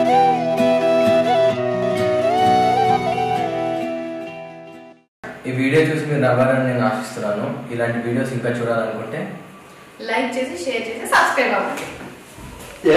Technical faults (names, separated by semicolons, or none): doubled audio track